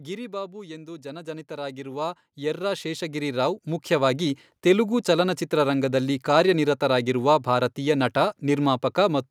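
From 0.05 to 0.81 s, automatic gain falling is heard. The gain control judged the input too loud and pulled its level down. The speech starts loud, then sinks by about 4 dB. The background drops with it.

From 0.77 to 4.35 s, automatic gain rising follows. The control now found the input too quiet and raised its gain slowly, by about 17 dB. Speech and background swell together over several seconds. The level settles just before "ತೆಲುಗು ಚಲನಚಿತ್ರರಂಗದಲ್ಲಿ ಕಾರ್ಯನಿರತರಾಗಿರುವ ಭಾರತೀಯ".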